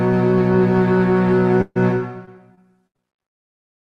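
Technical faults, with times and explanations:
1.61 to 1.77 s, burst of packet loss: About 140 ms of audio arrived too late or not at all. The receiver extended the last sound to cover the hole and faded it out, ending in roughly 20 ms of silence. Playback then resumes further along.
2.25 to 3.26 s, repeated packet loss (robotic sound): Five separate dropouts hit this stretch, the longest 77 ms. Each one is patched by stretching the preceding sound. About 15% of the span is concealed this way, giving a choppy texture with small pieces skipped.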